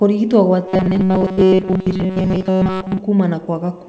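A speech recording carried over a call link, with nothing audible above 8 kHz. From 0.68 to 3.0 s the voice turns into a rigid metallic drone. It has a fixed buzz at 188 Hz. This is robotic sound from repeated short buffers, likely caused by audio arriving too seldom. The gaps are filled by looping about 5.3 ms of sound over most of that stretch. At 1.34 to 1.39 s there is short concealed packet loss. About 40 ms never arrived, and 32 ms was patched by extending the previous sound, leaving a brief smear.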